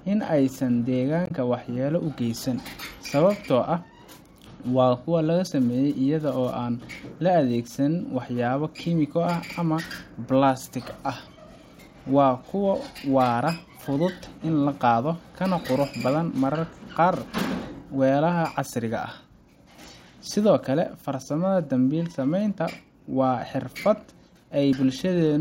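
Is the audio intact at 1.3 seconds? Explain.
No, damaged data in the compressed stream garbles the speech from 1.25 to 1.31 s: the decoder misreads corrupted frames, giving a brief chirp, squawk, click or short hole.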